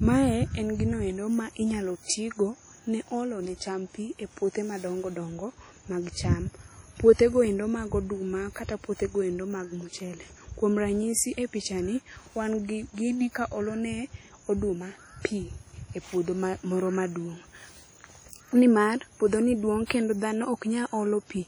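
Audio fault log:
throughout, WMA compression: heavy ringing and washy smearing, with hiss that breathes with the speech and faint detail missing. This likely comes from long transform blocks at a bitrate near 32 kbps. Unlike steady background hiss, it tracks the signal, and content still reaches 20.1 kHz.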